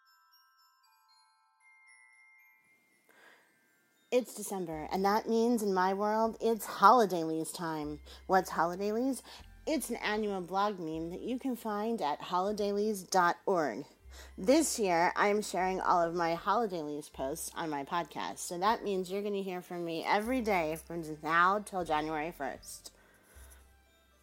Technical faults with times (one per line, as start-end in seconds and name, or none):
none